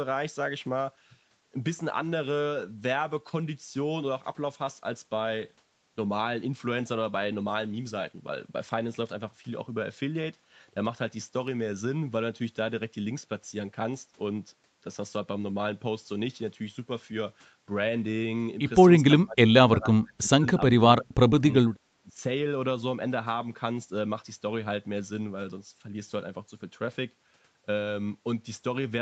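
Speech recorded through a call's microphone processing, with nothing above 8 kHz. Between 19.23 and 22.18 s, the voice dips three times: 19.23 to 20.47 s, 20.68 to 21.43 s, and 21.99 to 22.18 s. The deepest cuts are roughly 35, 30 and 30 dB. The sound is speech suppressed in double talk. The likely cause is an echo canceller that mistook this talker for loudspeaker echo while the far side spoke, and turned both down.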